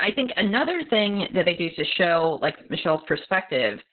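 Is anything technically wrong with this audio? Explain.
Yes, the whole clip has heavy Opus voice compression. Nothing reaches above 4.2 kHz, which fits SILK in narrowband at roughly 6 kbps, so the speech sounds muffled, hoarse and somewhat robotic.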